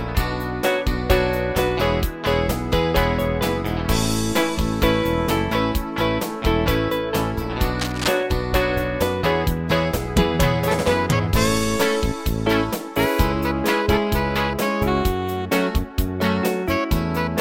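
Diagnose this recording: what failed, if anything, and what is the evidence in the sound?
There's a short burst of cable scratch noise from 7.79 to 8.08 s, a dense, ragged scratching laid over the sound only a few dB below it. That points to the analogue wiring: likely a worn cable or connector being moved, its contact resistance jumping around.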